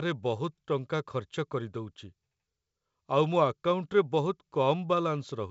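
No technical faults are audible in this speech.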